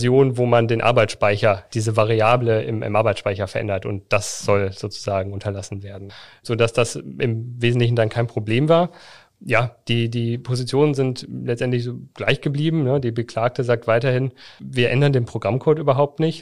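At about 8.15 s there's a repeated buffer: fresh audio didn't arrive in time, so the device replayed the last 5.3 ms chunk once more, which fits a 256-sample buffer. With a slice that short, it comes across as a single small click in the speech.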